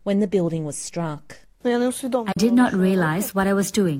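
At about 2.31 s the sound drops into a brief dip lasting roughly 0.06 s. This is AAC frame loss with muting. One lost frame's spectrum was zeroed, about 43 ms of audio. Overlapping windows fade it out and back in.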